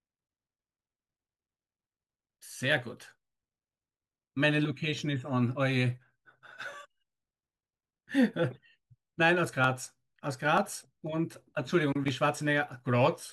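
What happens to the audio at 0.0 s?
Nothing goes wrong at 0.0 s; the audio is intact there, with no dropout, click or distortion at that moment.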